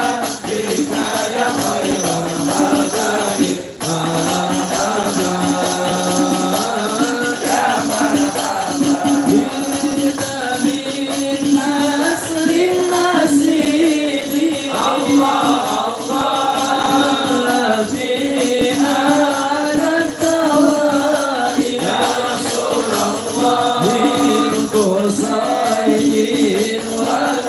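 Throughout the clip runs a regular tick train at 20 Hz, the signature of a resampler restarted on every block. Each 50 ms block was converted in isolation, which fits a 24 kHz to 48 kHz upsample, so every block edge carries a small interpolation error, heard as a steady buzz under the signal.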